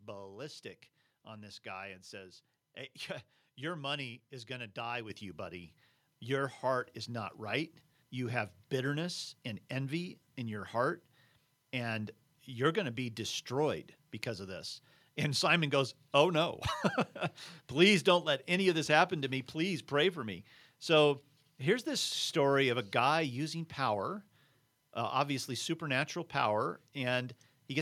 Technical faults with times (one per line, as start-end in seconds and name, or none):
5.10 microphone volume stepped up